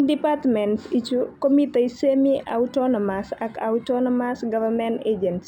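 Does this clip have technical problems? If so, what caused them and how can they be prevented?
Yes. Imaging from linear upsampling runs throughout: dulled top end, with faint mirrored shimmer from 6 kHz to 12 kHz, roughly 40 dB down, fitting straight-line interpolation from 12 kHz to 44.1 kHz. Unlike aliasing, the added content mirrors upward above the band edge rather than folding down. Prevent it by resampling with a proper band-limited (windowed-sinc or polyphase) filter.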